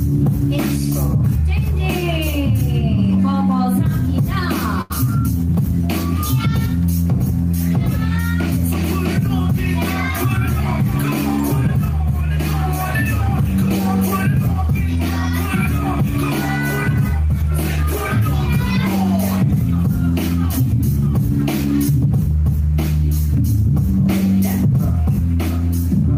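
At 4.81 to 4.92 s, a short stall from a late packet holds the last sound for 86 ms with a faint buzz or dip, visible as a smeared, repeated patch on the spectrogram. From 17.42 to 17.84 s, a jitter buffer speed-up trims around 70 ms of pitch periods, so the sound runs at 113% speed and pitch unchanged.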